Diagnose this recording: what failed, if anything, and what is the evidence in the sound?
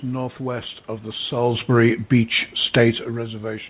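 Nothing stood out on listening: the room noise, the level shifts as the talker moves around 1.5 s and 3.0 s, and the narrow telephone bandwidth with nothing above 4 kHz all sound as expected for a call carried over G.711 mu-law at 64 kbps.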